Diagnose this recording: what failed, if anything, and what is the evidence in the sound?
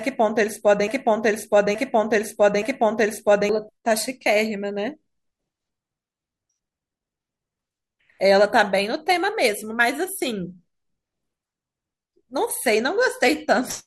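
A broken-record loop is already under way when the speech starts and runs from 0.00 to 3.49 s. A 0.87 s fragment repeats exactly three times, back to back, and the speech for that span is lost. The likely cause is a stalled player, encoder or stream that kept resending its last buffered fragment.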